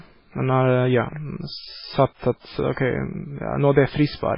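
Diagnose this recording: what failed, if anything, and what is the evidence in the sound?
Codec stage: the speech loses everything above 5.3 kHz and swirls watery throughout, likely MP3 compression near 16 kbps. A fixed treble cut, not gradual dulling, separates it from mic muffling.

Pre-echo, codec stage: a short hiss spreads about 44 ms ahead of an attack, 2.73 to 2.77 s. Quantisation noise smeared before the onset, not trailing after it, distinguishes it from reverb.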